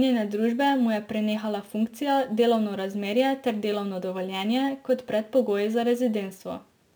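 Throughout the speech, imaging from sample-and-hold upsampling adds a bright metallic fizz. Samples were repeated to reach 48 kHz from about 22 kHz, so a mirrored copy about 27 dB down fills 11.03 to 22.05 kHz, appearing on a spectrogram as flipped speech bands.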